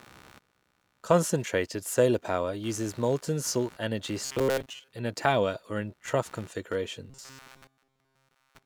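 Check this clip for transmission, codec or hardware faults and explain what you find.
Two faults are present: a steady hardware interference layer and two stretches of buffer-repeat distortion.

Computer activity noise runs through the whole clip. Changing load on the computer's components shifts the ground shared with the audio circuit, injecting a buzzy, pulsing scratch at around 70 Hz, about 30 dB below the speech, that follows machine activity rather than the speech.

Robotic sound from repeated short buffers appears from 4.25 to 4.90 s, between "uses molten salt energy" and "in a tower or", and again from 7.10 s to the end. The likely cause is fresh audio arriving too rarely, so a segment of about 7.5 ms is looped over most of the span while the real audio is dropped. This stamps a rigid, metallic 133 Hz buzz onto the speech, which only loosely tracks the words.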